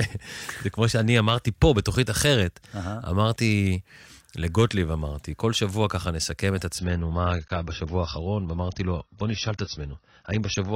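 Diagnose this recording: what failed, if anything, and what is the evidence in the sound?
The failure is at the network stage: an adaptive stream at a lower bitrate. At 6.79 s the speech drops abruptly to a duller, more artefact-laden rendition with nothing above 6.5 kHz, continuing to the end without any gap. The band-limiting fits a switch from roughly 96 kbit/s AAC to a 24 kbit/s rendition.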